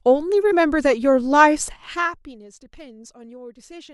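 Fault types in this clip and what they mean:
No technical faults can be heard in this speech clip.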